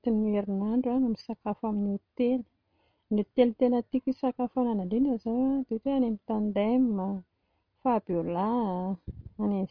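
No technical faults are audible.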